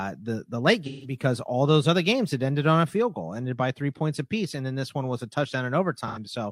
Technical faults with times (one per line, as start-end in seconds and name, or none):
0.86-1.16 AAC frame loss with concealment
6.07-6.19 AAC frame loss with concealment